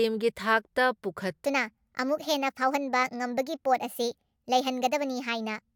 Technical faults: section at the wrong speed

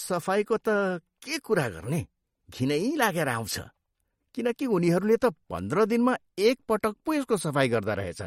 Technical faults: MP3 compression

